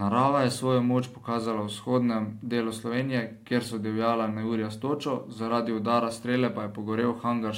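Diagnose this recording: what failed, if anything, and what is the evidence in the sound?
The converter failed: from 0.52 s to the end the speech carries sample clock jitter. A fine hiss and roughness rides on the voice, strongest on loud and bright sounds such as sibilants, and it drops away in the pauses. An unsteady clock of a couple of microseconds shifts each sample in time, and the error grows with the waveform's slope, sitting roughly 40 dB below the signal. On a spectrogram, a faint noise haze tracks the energetic high-frequency regions, and the waveform's gaps stay clean.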